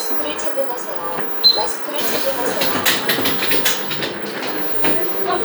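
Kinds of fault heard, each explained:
Nothing stood out on listening to this recording of sounds.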